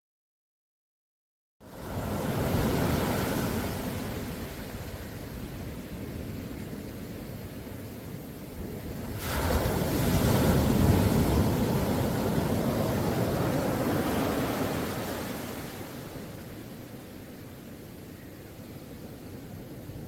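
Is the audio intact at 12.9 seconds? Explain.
Yes, the audio is intact at 12.9 seconds, with no dropout, click, distortion or other fault at that point.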